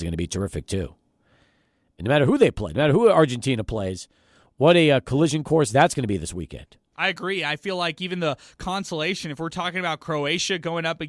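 No technical faults can be heard anywhere in the speech recording, and the signal stays continuous and intact throughout.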